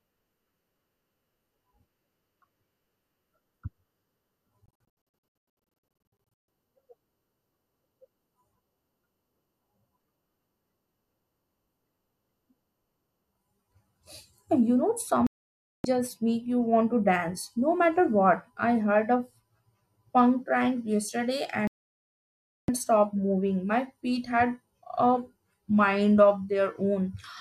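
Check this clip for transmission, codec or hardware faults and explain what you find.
Yes, there's digital broadcast dropout in three places. From 4.66 s, short holes scatter over about 1.8 s, the longest 144 ms. Then there's a gap of about 0.58 s at 15.27–15.85 s, just before "just make you want." Another gap, about 1 s at 21.67–22.69 s, falls between "punk prank yesterday" and "stop moving." Each time the receiver lost good frames and muted, so the speech cuts to silence and that stretch is simply gone.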